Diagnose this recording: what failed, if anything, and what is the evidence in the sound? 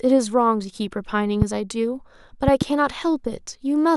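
Loud pops at 1.42 to 1.44 s and 2.48 to 2.64 s, the second a double, peaking roughly 20 dB and 15 dB above the speech, which continues underneath. The likely cause is a voltage step in the analogue wiring, such as a plug, switch or static discharge.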